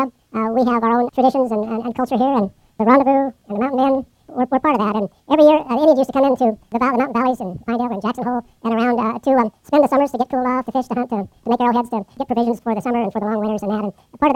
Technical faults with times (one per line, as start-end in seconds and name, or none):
0.00-14.36 wrong sample rate